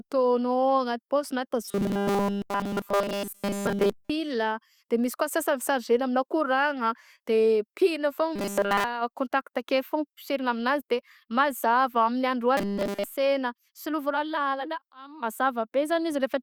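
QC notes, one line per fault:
1.65–4.10 s, 8.36–8.84 s, 12.57–13.04 s: robotic sound from repeated short buffers. Speech turns to a rigid 200 Hz metallic buzz. Likely a 5 ms slice looping while nearly all real audio is skipped.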